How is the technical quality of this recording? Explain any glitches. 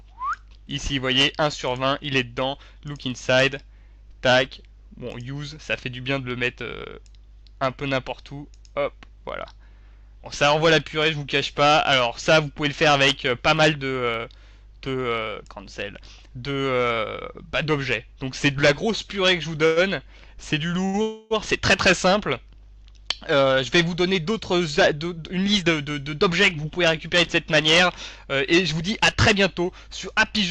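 The recording has several network-timing glitches clustered in its second half, all of the kind heard on a call whose packets arrived unevenly.

Call audio freeze, 19.66–19.79 s and 21.02–21.33 s: the last sound is drawn out into a fading buzz for about 105 ms and then 287 ms before the audio resumes where it stopped. This is likely a jitter buffer running empty while packets were held up. A spectrogram shows smeared, frozen horizontal bands, and the waveform shows a decaying repeated pattern.

Short stall from a late packet, 20.85–20.97 s: one packet came late, so the receiver stretched the preceding sound by about 83 ms and then continued without loss. It is heard as a briefly held sound with a slight buzz or dip. On a spectrogram it is a short stretch of unchanging harmonics, and on the waveform a brief run of repeated periods.

Jitter buffer speed-up, 24.03–25.86 s at 108% speed and 29.12–30.34 s at 105%: the receiver trimmed excess buffered audio by cutting out one or a few pitch periods many times, removing roughly 150 ms and then about 70 ms. 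The sound is hurried at unchanged pitch. Spectrogram features appear compressed in time, and the waveform has tiny periodic splices.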